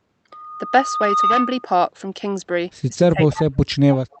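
From 3.05 s to 4.11 s the speech keeps dropping out, sinking as deep as about 40 dB and losing roughly a second in total. That's speech suppressed in double talk, most likely an echo canceller clamping down while both ends talk at once.

An echo leak shows up from 3.31 to 3.44 s as a delayed copy of the speech, 308 ms late and about 15 dB below it. A fainter scrap at 4.12 s, around 35 dB down, likely comes from the loudspeaker side's canceller letting loudspeaker pickup slip back.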